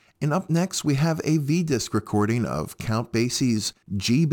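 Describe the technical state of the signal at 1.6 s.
At 1.6 s the speech carries sample clock jitter, present across the whole clip. The converter's clock wanders by a few microseconds, so samples land slightly off time. Steep waveform slopes turn this into a fine hiss, roughly 30 dB below the signal.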